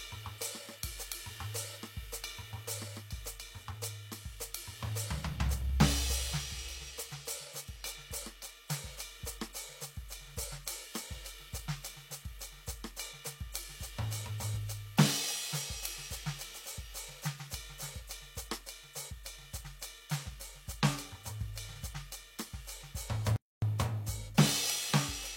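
At 23.36 s the music cuts out abruptly in mid-flow and the output falls completely silent for about 260 ms, until 23.62 s, before the sound returns. This is a playback stall. The gap is long enough to register clearly as a dropout rather than a click. The likely cause is the player running short of buffered data, or its audio thread being blocked, so nothing reached the output until it recovered.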